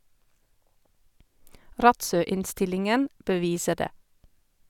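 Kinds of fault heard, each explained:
No technical faults can be heard anywhere in the speech signal.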